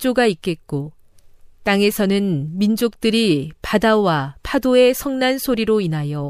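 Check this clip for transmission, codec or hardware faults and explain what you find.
Nothing wrong can be heard anywhere in the recording.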